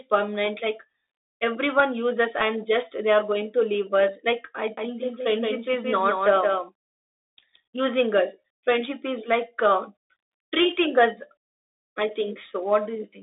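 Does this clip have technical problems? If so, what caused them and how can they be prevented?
Yes. Throughout the clip the speech carries the sound of a Bluetooth CVSD headset codec. Everything above 3.8 kHz is missing, s sounds are scratchy, and a granular hiss sits under the speech. This fits a one-bit, 64 kHz delta stream whose step size cannot keep up with loud high sounds. On a spectrogram the energy stops at a hard ceiling near 3.8 kHz, over a grainy noise floor. To prevent it, switch the headset to a wideband profile or record with a wired microphone.

From 4.77 s to 7.57 s, between "leave us like i" and "using us friendship is", there is a doubled audio track. A full-band copy, about 5 dB quieter, follows roughly 150 ms behind the original with no room decay, and it starts and stops abruptly. The likely cause is a second, slower capture path or an edit holding two offset copies. 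On the waveform and spectrogram every onset appears twice in that span, about 150 ms apart. To prevent it, route only one capture path into the recording and check edits for overlapping duplicate regions.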